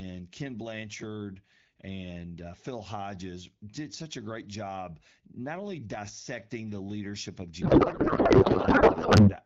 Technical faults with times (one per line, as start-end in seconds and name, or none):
7.61-9.33 codec payload misread